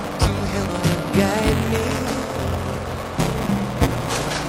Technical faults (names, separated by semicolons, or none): buffer tearing; compressed frames skipped